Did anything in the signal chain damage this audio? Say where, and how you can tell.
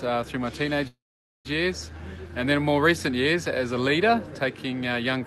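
Yes. From 0.87 to 1.47 s the sound breaks off: the last sound trails on as a fading buzz or hiss, then about 480 ms of silence, and the audio resumes where it left off. This is likely a call audio freeze, where delayed network packets emptied the jitter buffer.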